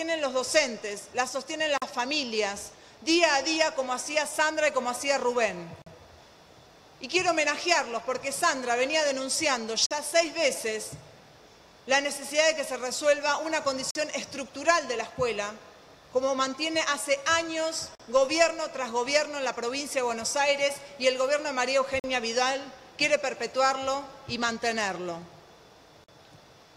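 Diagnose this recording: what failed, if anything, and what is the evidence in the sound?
Gap between chunks at the storage or playback stage: the audio was handled in 4-second chunks, and silence was inserted at each join rather than the chunks running seamlessly. Hard-edged 44 ms holes open at 1.78, 5.82, 9.86, 13.91, 17.95, 22.0 and 26.04 s.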